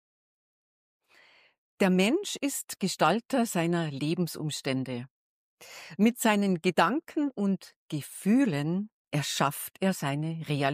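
Nothing is technically wrong with this audio clip.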